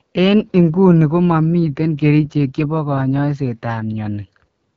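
Speech run through an AMR wideband (HD Voice) codec the whole way. It's rough and raspy, fitting one of the lowest rates like 8.85 kbit/s, with nothing above 6.8 kHz.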